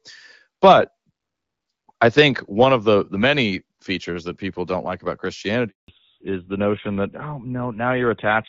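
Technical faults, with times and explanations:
0.63–0.74 s and 2.05–2.22 s, microphone overload: loudest peaks flatten against the converter ceiling, giving a harsh crackle; likely input gain set too high, about 3 dB over, then about 1 dB.
5.68–5.88 s, handover gap: right after "people don't like about", the sound drops out for 200 ms while the call switches networks and no frames arrive.
5.88 s to end, fallback to narrowband: after the handover, the call leaves HD Voice for an older narrowband codec, so nothing above 4 kHz remains and speech sounds duller.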